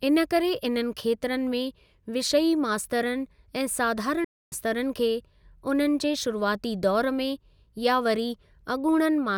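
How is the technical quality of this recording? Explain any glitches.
The recording has one glitch, a playback stall from 4.24 to 4.52 s. The player likely ran short of data or had its output thread blocked, so nothing reached the output for about 0.27 s. The speech drops abruptly to silence mid-flow, then carries on.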